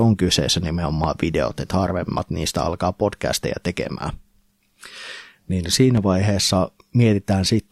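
A speech recording with two loud pops laid over the talking, which carries on underneath each one. The first, at 1.04 to 1.06 s, peaks roughly 15 dB above the speech; the second, at 5.97 to 6.00 s, is weaker at around 10 dB. Each is a single sharp burst, likely from a voltage step such as a plug, switch or static discharge. On a waveform each shows as a tall, narrow spike; a spectrogram shows a thin vertical line spanning the whole frequency range.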